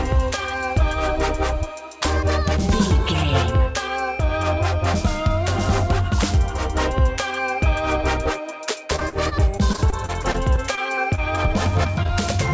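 Between 8.96 and 11.20 s the audio turns choppy and robotic, with a stuttering quality and small pieces missing. This is repeated packet loss (robotic sound): audio kept failing to arrive in time, and each hole, up to about 37 ms long, was patched by extending the preceding sound. Roughly an eighth of that stretch is filler. Brief smears or wobbles follow at 11.84 to 11.87 s and 12.03 to 12.11 s, the second being two back-to-back dropouts. These are short concealed packet loss, where roughly 20 ms chunks went missing and the receiver bridged each gap by continuing the last sound before blending back in. The whole clip carries no content above 8 kHz, which fits a wideband call codec such as 64 kbps G.722.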